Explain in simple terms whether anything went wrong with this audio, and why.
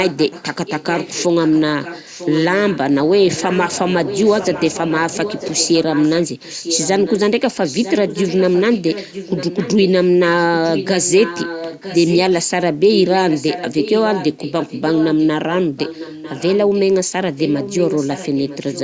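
Echo leak runs through almost the whole recording: 0.04–2.78 s, 3.36–7.3 s, 7.65–9.9 s, 10.64–12.49 s, 12.91–16.81 s and 17.35 s to the end. A fainter copy of the speech repeats just under a second later, likely because a loudspeaker's sound reached the microphone and the echo cancelling failed to remove it.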